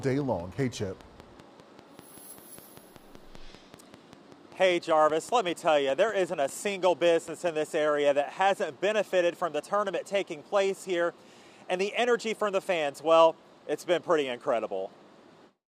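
Right from the start, at 0.02 s, there's a train of clicks that runs until about 7.49 s. They tick along at a steady 5.1 per second, around forty in all, each with much the same shape and peaking roughly as loud as the sound itself, so they sit right on top of it and carry on through the quieter gaps. Something was likely pulsing into the signal chain, maybe interference from nearby gear or a faulty connection or power supply.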